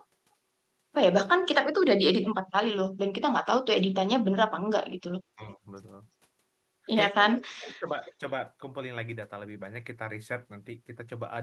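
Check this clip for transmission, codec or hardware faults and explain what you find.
Two faults are audible: an echo leak in three places and speech suppressed in double talk in two, both set against a call path whose audio stops around 12 kHz, which fits Opus at about 32 kbps.

Echo leak appears at 2.22–2.35 s, 7.25–7.47 s and 8.06–8.10 s. A faint delayed copy of the speech trails the original by about 0.34 s, roughly 15, 20 and 35 dB below it. The likely cause is a far-end echo canceller letting loudspeaker pickup return down the line.

Speech suppressed in double talk hits at 5.36–5.64 s and 7.36–7.91 s. The talker's level sinks by around 20 dB, then around 30 dB, for roughly 150 ms and half a second. The likely cause is the echo canceller confusing overlapping talk with echo and attenuating both.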